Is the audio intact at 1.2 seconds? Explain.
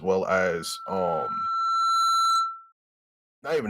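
No. At 1.2 seconds a loudspeaker feedback squeal is sounding, running from 0.40 to 2.72 s. The microphone is picking up its own loudspeaker, and the loop gain tops one at 1.3 kHz. That tone is still swelling here, growing over about a second and a half to roughly 5 dB above the speech.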